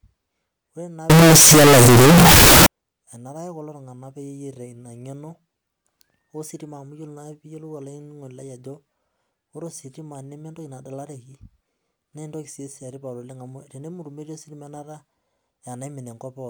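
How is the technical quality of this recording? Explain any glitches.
The recording has one serious glitch. From 1.10 to 2.66 s the speech turns into a blast of harsh, very loud distortion, with quiet moments as loud as the rest. The likely cause is signed and unsigned mixed up in the 16-bit samples: the top bit flips, so each zero crossing jumps across the entire range. Plain clipping would only flatten the peaks and leave quiet passages quiet.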